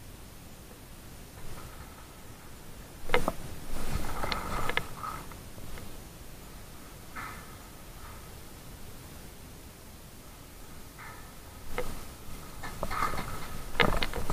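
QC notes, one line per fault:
No faults found. Nothing in the audio calls for a note.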